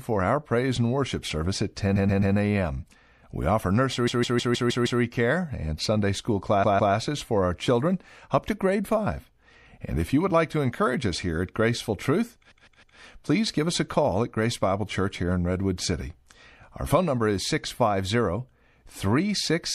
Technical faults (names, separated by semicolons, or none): MP3 compression; repeated frames